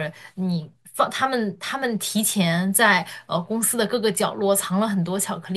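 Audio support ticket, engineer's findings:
Listened through the whole speech clip and found nothing to flag, so no findings to log on this one.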